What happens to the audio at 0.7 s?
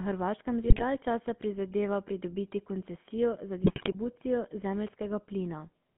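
Between 0.62 and 0.83 s, GSM bit errors corrupt the decoder's filter, pitch and gain values frame by frame, so the speech breaks into squawks, pops and gargling bursts. Underneath, the GSM full-rate codec rebuilds the voice from pulse-driven vocal-tract modelling within a 150 Hz to 3.4 kHz band, giving a buzzy, gravelly roughness.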